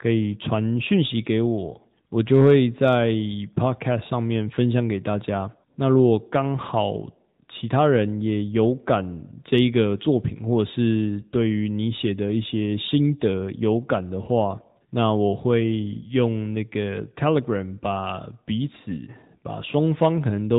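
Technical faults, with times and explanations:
Throughout, AMR narrowband mobile codec: the speech stops dead at about 3.8 kHz and has a plainly audible buzzy, slightly synthetic edge. That comes from the phone codec rebuilding the voice from a vocal-tract model and sparse pulses, which fits a mid-range AMR-NB mode around 10 kbps.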